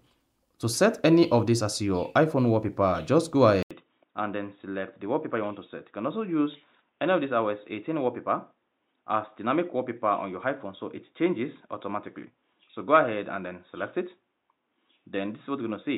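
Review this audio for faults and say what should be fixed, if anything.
Likely input switched to a poorer device at 3.63 s: an 80 ms gap, then nothing above 3.8 kHz, about 5 dB quieter, faint new noise. Prevent it by locking the recording input to one device and disabling automatic switching to headsets or their call profiles.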